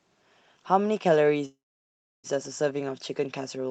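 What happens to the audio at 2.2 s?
At 2.2 s the audio is inside a call audio freeze running from 1.45 to 2.27 s, likely caused by packets stalling so the jitter buffer ran dry. The receiver stretches the last sound into a brief fading buzz or hiss, then about 0.68 s of silence, before the audio resumes where it stopped, about 0.78 s late, with nothing lost. On a waveform this shows as a decaying tail and then a flat line. A spectrogram shows a short horizontal smear followed by a blank stretch.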